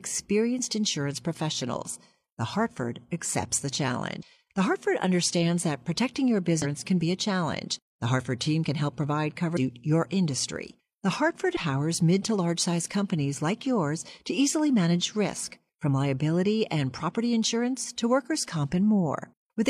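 Right after "accepts the", at 4.18 s, there's a short glitch of about 50 ms, the first of four hits from damaged data in a compressed stream. The others land at 6.60 s, just before "can be a challenge", at 9.52 s, and at 11.52 s, just ahead of "mid to large size", each around 50 to 65 ms. Corrupted bytes make the decoder misread those frames and lose sync until it finds the next header, so each one comes out as a brief glitch.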